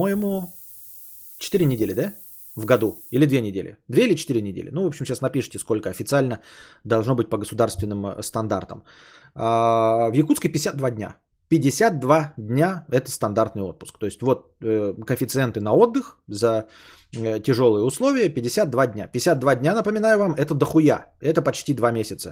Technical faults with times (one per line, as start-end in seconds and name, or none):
0.00-3.18 low bit depth with noise shaping